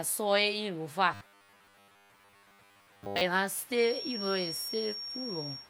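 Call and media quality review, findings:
Robotic sound from repeated short buffers, 1.14 to 3.22 s. Speech becomes a rigid 100 Hz metallic buzz. Likely starved jitter buffer looping 10 ms chunks, skipping most real audio.

Feedback whistle, 3.7 s to end. Thin steady 5.5 kHz tone, about 10 dB below speech, swelling and fading slowly. Likely speaker-to-mic acoustic loop sitting at the edge of feedback.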